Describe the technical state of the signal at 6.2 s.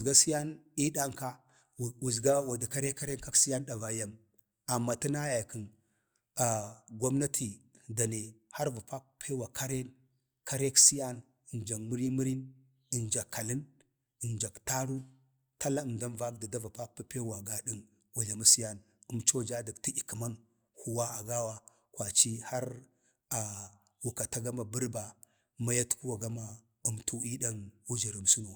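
At 6.2 s the signal is intact, with no audible fault at that moment.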